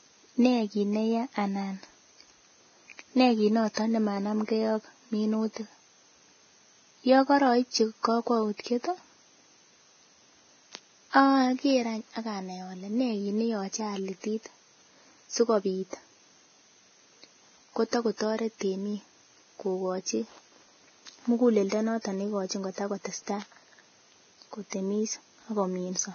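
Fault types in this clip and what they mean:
Vorbis compression: likely heavy low-bitrate coding around 18 kbps; the speech sounds hissy and grainy, and a spectrogram shows nothing above 6.5 kHz plus smeared, noisy treble.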